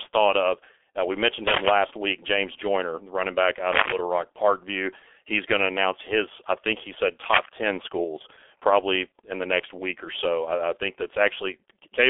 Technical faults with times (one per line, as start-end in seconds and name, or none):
0.00-12.09 G.723.1 codec